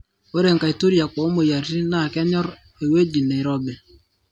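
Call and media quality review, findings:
Nothing to flag here: the speech comes through without any audible problems, so there's no fault to chase.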